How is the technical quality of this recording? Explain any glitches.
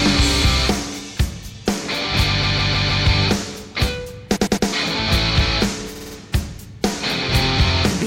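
The recording has three stretches of repeated frames, where a short run of compressed data was delivered more than once and the decoder played it again. From 2.42 to 3.05 s a 157 ms block loops four extra times. From 4.35 to 4.67 s a 105 ms block repeats three more times. From 5.95 to 6.15 s a 52 ms block plays four extra times. Each is a mechanical stutter, and together they add about 1.1 s.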